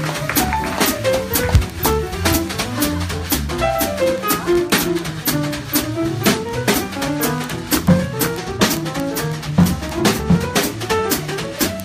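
From 0.11 s to 11.83 s a steady rattling buzz sits under the sound: word clock ticks arriving roughly every 30 ms, hundreds in all. The receiving device runs on its own clock, several hundred parts per million apart, so each slip misreads samples and drops or repeats one.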